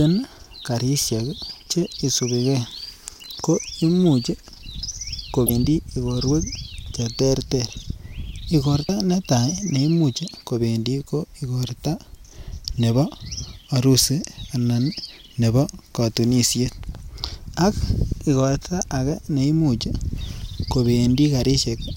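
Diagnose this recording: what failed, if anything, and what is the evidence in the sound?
Damaged data in the compressed stream. Faults at 5.46–5.50 s, before "igorwek che terter", and 8.86–8.89 s, before "netaa neimuch". Corrupt frames broke decoder sync.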